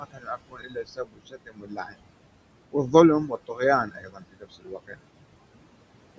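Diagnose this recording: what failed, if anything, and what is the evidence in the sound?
Noise suppressor artifacts, in the call processing stage. The room noise, about 13 dB below speech, is cut by about 21 dB between phrases.

Speech cut by the noise suppressor at 0.0–2.01 s, 3.47–3.6 s and 3.86–4.96 s. The suppressor mistook speech for noise, pulling it down by up to about 22 dB.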